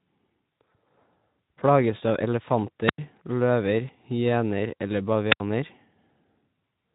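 At 2.86 s the wireless microphone hits a squelch dropout: the RF signal fades, the receiver's squelch mutes the output, and you get a quick lift of hiss, then about 93 ms of near silence before the speech comes back at 2.99 s. It happens again from 5.31 to 5.40 s, with a hole of about 76 ms.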